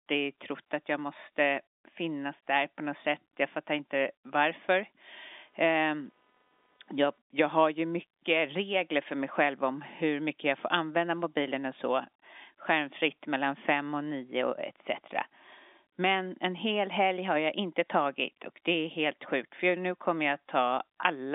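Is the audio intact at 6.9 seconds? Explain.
No. From 5.07 to 7.18 s, shifting load in the computer's processor, graphics card or mouse disturbs the ground the audio circuit shares, and this computer activity noise appears as a faint buzzing at roughly 300 Hz, far below the speech, tracking the machine rather than the voice.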